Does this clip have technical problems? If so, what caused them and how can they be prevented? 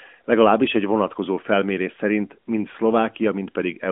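No, this clip has no technical problems, so there is nothing to prevent.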